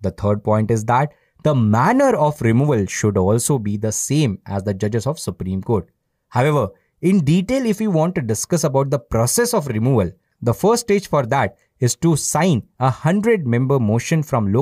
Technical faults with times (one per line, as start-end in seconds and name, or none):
none